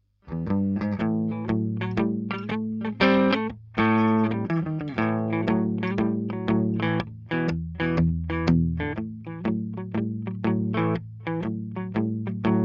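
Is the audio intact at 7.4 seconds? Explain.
Yes, the audio is intact at 7.4 seconds, with no dropout, click, distortion or other fault at that point.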